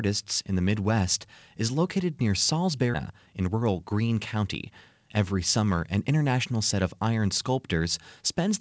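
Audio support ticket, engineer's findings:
Skip ahead at 2.94–2.96 s: about 0.7 s of speech missing, joined with no gap. Queued audio dropped in transit or by an overflowing jitter buffer, shortening delay by the same amount.

Jitter buffer speed-up, 3.09–4.71 s: speech runs at 111% speed with unchanged pitch and sounds hurried. Buffer trimmed pitch-period pieces, about a fifth of a second in total, to reduce excess delay.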